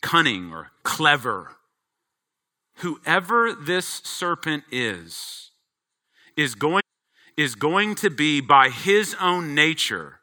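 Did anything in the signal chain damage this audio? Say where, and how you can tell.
Yes. The damage happened at the network or streaming stage. A stream segment was repeated. From 6.79 to 7.80 s, about one second of the speech plays a second time. There is a small blip where playback jumps back, and the passage then carries on into "to be by his". The player fetched or queued the same segment twice, so about 1.0 s of extra time is inserted. The repeat comes in a single clean block, which points to segment handling rather than the recording.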